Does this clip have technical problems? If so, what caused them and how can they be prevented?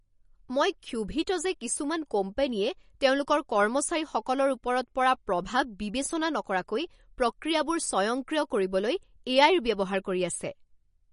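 Yes. MP3 compression, throughout: nothing above 10.6 kHz, with watery, swirly speech where bits ran short, likely a low-bitrate encode. Encode at a higher bitrate.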